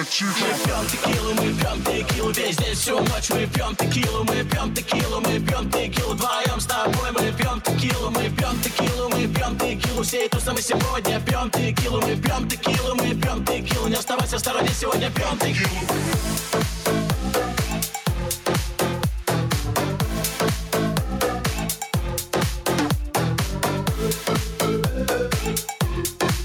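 Gain pumping runs through the whole clip: the gain ducks by roughly 5 dB under every loud sound, squashing the dynamics. Unlike a noise gate, it never cuts to silence. The likely cause is excess input gain driving a fast limiter.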